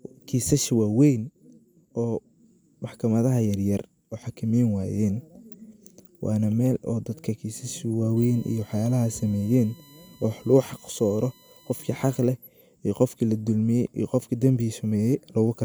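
From 8.17 to 12.21 s, USB whine rises behind the speech: a fixed 1 kHz-series tone, strongest at 4 kHz and far below the speech, unlike mains hum's 50/60 Hz pitch.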